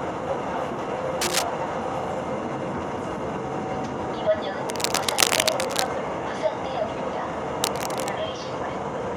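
Cable scratch noise, likely from a worn cable or connector being moved, appears at 1.21–1.43 s, 4.69–5.90 s and, slightly quieter, 7.64–8.10 s. It sounds like rough scratching, shown as dense broadband smears and jagged waveform bursts.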